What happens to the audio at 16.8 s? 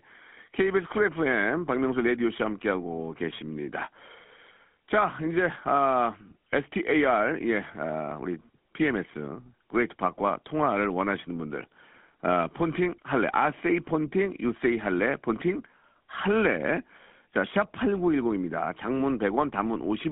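At 16.8 s the speech is still passing through a GSM full-rate codec, as it does for the whole clip. The encoder models the vocal tract and drives it with an excitation built from regularly spaced pulses, keeping only every third sample, within a line band of about 200 Hz to 3.4 kHz, consistent with the 13 kbps full-rate coder. The result is clearly audible damage: thin, band-limited speech with a buzzy, gravelly roughness.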